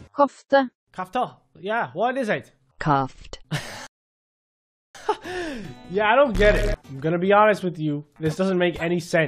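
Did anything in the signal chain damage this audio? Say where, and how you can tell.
Yes, at the playback stage there's a rebuffering stall from 3.87 to 4.95 s. The sound drops to dead silence for about 1.08 s, then picks up exactly where it left off, with no skipped material. That's the player draining its download buffer and waiting for more data before carrying on. Nothing's missing, but the clip runs about a second longer than the material itself.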